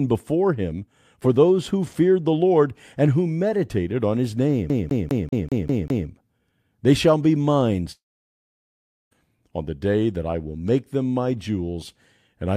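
From 4.70 to 6.08 s, just after "who meditated on his", a rapid, even stutter repeats the same 0.2 s fragment seven times, each with a tiny mute at the jump. This is a CD stuck on one turn: a scratch keeps throwing the laser back one track.

At 7.92 s, after "shall be mine", the sound smears into a brief fading buzz and then about 1.1 s of silence. It returns at 9.13 s with "on the day that", with roughly 1.2 s of speech gone. A long network dropout is the likely cause: the receiver padded the gap and never recovered the lost audio.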